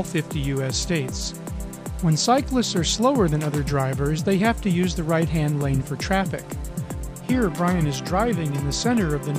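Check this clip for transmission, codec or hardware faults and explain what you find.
No transmission, codec or hardware fault is audible anywhere in the recording.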